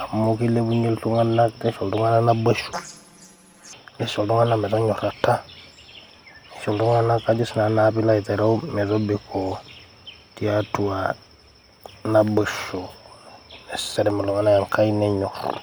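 From 2.73 s to 3.73 s the speech turns into a robotic buzz with a steady rasp at about 86.1 Hz, and there is no clear octave jump. This is planar audio read as interleaved. Each block stores all its left samples followed by all its right samples, but it is read as alternating left-right pairs. Every block therefore plays twice at double speed, once as left and once as right. The blocks here last 11.61 ms, which fits a 512-sample buffer. At that length the block repetition is heard as a buzz rather than as raised pitch.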